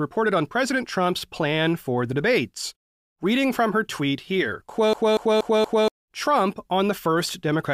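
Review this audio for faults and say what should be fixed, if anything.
Right after "from her tweet here", from 4.93 to 5.88 s, the speech hits a CD stuck on one turn. A scratch keeps sending the laser back one track, so the same 237 ms slice plays four times, each pass broken by a brief mute at the jump. A waveform shows four identical blocks with thin gaps, and a spectrogram shows one pattern tiled at even 237 ms spacing. Prevent it by ripping from a clean disc with an error-correcting extractor.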